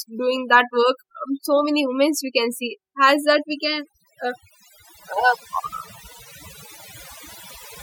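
From start to finish the speech carries overdone noise removal: a noise reducer set too hard strips whole frequency bands near its noise estimate, leaving near-silent gaps with twinkling specks. Unlike a noise gate, it works band by band rather than on the whole signal at once.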